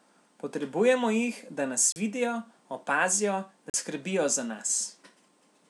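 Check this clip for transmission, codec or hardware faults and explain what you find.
Two short dropouts to silence interrupt the speech, at 1.92 to 1.96 s and 3.70 to 3.74 s, lasting 37 ms and 41 ms. Each is likely a Bluetooth stall: delayed packets emptied the headphone buffer, pausing playback. The waveform shows flat gaps, and the spectrogram shows blank vertical strips.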